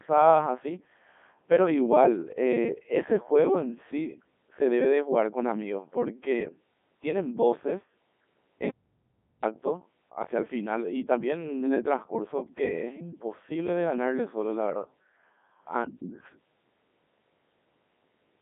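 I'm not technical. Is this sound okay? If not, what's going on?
No. From start to finish the speech sounds robotic and buzzy, thin and muffled, with nothing above about 3.6 kHz. That is the Codec 2 vocoder, a digital-radio system that sends only a rough sketch of the voice and rebuilds it from simple tones, losing the real sound.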